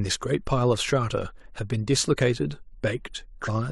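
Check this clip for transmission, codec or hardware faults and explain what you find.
One codec fault stands out. At 3.44 to 3.49 s, compressed frames were skipped: missing or rejected frames let the speech jump ahead about 0.3 s.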